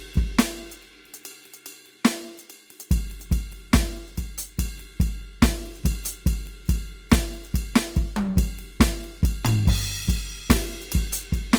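A music recording in which every tone sounds rough, grainy and noisy from start to finish, with the damage plainly audible, though the top end still reaches about 20.2 kHz and the spectrum has no obvious holes or swirling. That texture points to Opus compression in its music (CELT) mode, likely at a bitrate around 24 kbps. Short of bits, the encoder preserves each band's energy but fills the fine detail with folded or noise-like content, which turns clean tones grainy.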